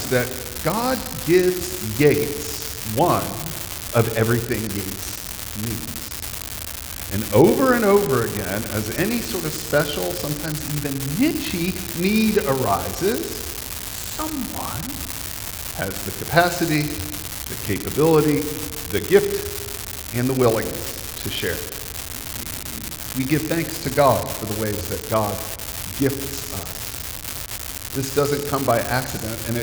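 From start to finish the audio carries an unreliable data bit: one marginal line flips at random, throwing identical spikes of about -9 dBFS. Unlike hiss or clipping crackle, the fizz stays uniform in size and keeps going through pauses, independent of the signal level.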